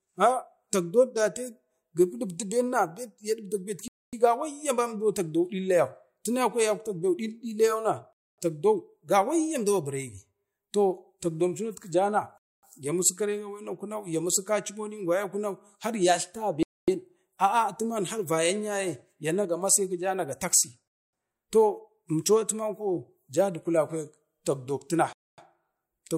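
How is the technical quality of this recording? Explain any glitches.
The speech is repeatedly interrupted by a gap between chunks. Silent holes of 250 ms fall at 3.88, 8.13, 12.38, 16.63, 20.88 and 25.13 s, one after every 4 s of audio. The speech pauses abruptly and resumes intact. A waveform shows flat, sharp-edged blanks, and a spectrogram shows empty vertical bands.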